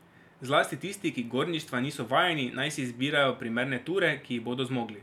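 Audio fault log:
No technical faults are present in this speech recording.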